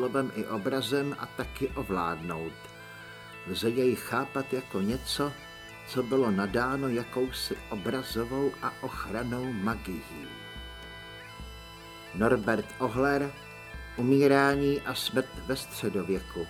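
No dropouts, clicks, distortion, level jumps or other technical faults can be heard anywhere in the recording, so there is nothing to time or trace to a cause.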